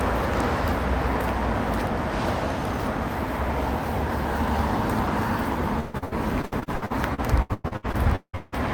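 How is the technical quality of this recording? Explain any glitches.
The recording has one fault near the end. From 5.79 to 8.54 s, repeated packet loss (robotic sound) occurs: packets kept arriving late or not at all, and each hole, up to 178 ms long, was patched by stretching the last sound. Nearly twenty gaps, about 44% of that stretch, become choppy, with pieces missing.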